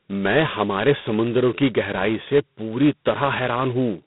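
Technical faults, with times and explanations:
Throughout, G.726 ADPCM: the speech carries a harsh, rasping hiss that rises and falls with its level. The coding here points to 16 kbit/s, two bits per sample of prediction difference. The line passes roughly 150 Hz to 3.7 kHz, with nothing above 3.9 kHz.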